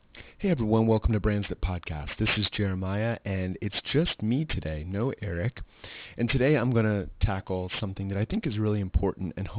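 Aliasing runs through the whole clip: the speech was resampled down without an anti-alias filter, which fits an 8 kHz rate, so sibilant energy folds back around 4 kHz into gritty, metallic hiss about 15 dB down. A spectrogram shows dense energy packed hard against a 4 kHz ceiling.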